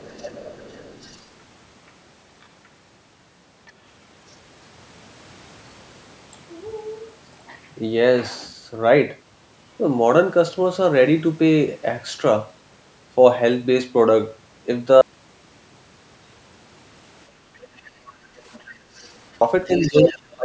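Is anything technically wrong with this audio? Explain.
Yes, there are four kinds of fault in this speech clip.

Other side's voice leaking through: the echo canceller likely failed to clear the loudspeaker signal from the microphone. A second voice sits under the talker from 0.0 to 1.22 s at about 25 dB down. Faint scraps, about 35 to 40 dB down, appear at 2.42–2.46 s, 3.66–3.71 s and 4.30–4.34 s. It returns at 18.54–19.12 s at about 30 dB down, then from 19.66 to 20.35 s at roughly the talker's own level.

Audio dropout to silence: the input was likely lost, through a disconnected device, a failed link or a mute, while the recording kept writing silence. From 15.01 to 19.41 s, about 4.4 s of sound is gone. The speech cuts off, leaving dead silence with no room tone, then resumes abruptly.

Background gated by the echo canceller: the canceller likely pulled the microphone down hard while the loudspeaker played. 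Between 17.42 and 18.92 s, the room sound dips by up to about 7 dB for around 0.7 s in total, then recovers as the canceller releases.

Speech suppressed in double talk: both sides likely spoke at once, and the canceller, unable to separate the talker from the echo, turned everything down. From 19.82 s to the end, the talker's voice sinks by as much as about 20 dB for roughly 0.3 s in total.

The call's microphone processing is also present, with nothing above 8 kHz.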